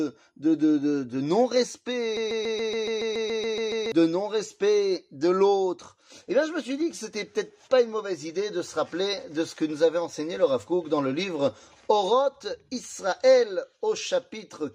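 At 2.17 s something in the chain, likely the player, encoder or stream, stalls and keeps resending the last short fragment it holds, producing a broken-record loop. A piece about 141 ms long repeats exactly, back to back, twelve times until 3.92 s, giving a rapid, mechanical stutter with an even rhythm of roughly seven repeats per second. Whatever audio belonged in those 1.75 seconds never plays.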